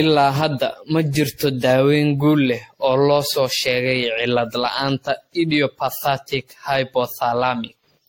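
From the start to the end of the speech, generation loss colours everything. The sound is swirly and hollow, with smeared attacks. Nothing reaches above 16.6 kHz. The likely cause is repeated lossy encoding, around seven passes, with a character that fits AAC at about 64 kbit/s. Each pass quantised on a shifted frame grid. The noise and spectral holes stacked up, leaving more damage than one encode would.

At 4.66 s a loud pop cuts in, and a second follows before 4.91 s. The two sharp clicks stand a few decibels above the speech, which carries on underneath. They likely come from a sudden voltage step, such as a plug, switch, static or driver glitch, entering the chain. The circuits after it shaped that jolt into this quick double pop.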